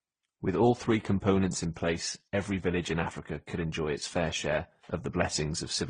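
Speech throughout carries the layered artefacts of transcoding between lossy codecs, likely a low-rate HE-AAC encode later re-encoded through AAC-LC and Opus. Unlike a single codec's artefacts, mixed artefact types overlap, with no content above 9.7 kHz.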